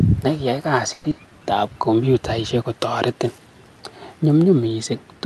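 Just after "ne kiyai", from 0.93 to 1.13 s, the sound turns into a smeared, fading buzz carried over from the last syllable, likely a long network dropout, with the delay shifting by roughly 70 ms. About 180 ms of that gap is synthetic continuation and roughly 60 ms is simply gone, so the speech resumes further on rather than where it stopped. Unlike a brief packet loss, the concealment is long enough that you hear it decay.

Right after, from 1.20 to 1.74 s, leading into "kompyutaishek kotoretin", a jitter buffer slow-down stretches the speech. The receiver was running low or had just raised its target delay, and rebuilt its reserve by repeating single pitch periods, adding 65 ms and running at about 89% speed. Pitch stays the same, so this is drawn-out timing, not a tape-style slowdown that would also lower the pitch.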